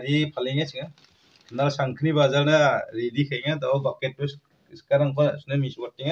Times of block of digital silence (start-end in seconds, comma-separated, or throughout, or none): none